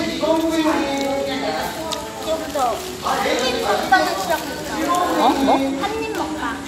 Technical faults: none

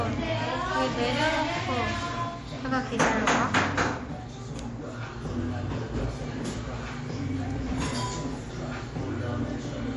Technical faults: MP3 compression

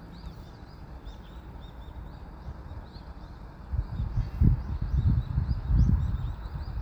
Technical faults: none

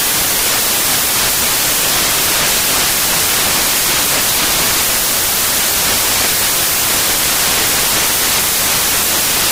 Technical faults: samples built from the wrong bytes

